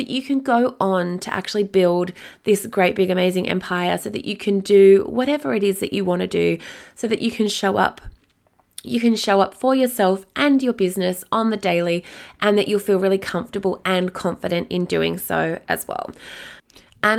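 Nothing goes wrong anywhere in this recording; the speech runs along without a single technical hiccup to point at.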